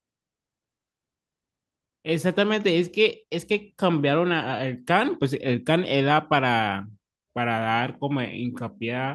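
No technical faults are audible in this speech.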